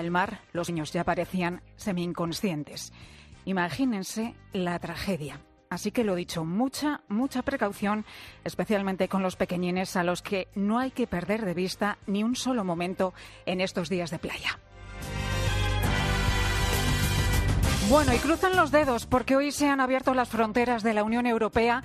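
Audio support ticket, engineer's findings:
Skip at 0.68 s, audio jumps ahead roughly a fifth of a second. Compressed frames skipped, about ten frames, fitting a 23 ms frame length.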